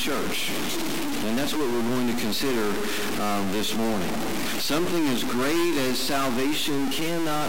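A harsh, buzzy distortion runs through the whole clip. Pauses fill with a steady noise rather than falling quiet. This is a stuck bit, likely from a broken data line or converter. About half the samples jump by one fixed step, around -20 dBFS, following the waveform.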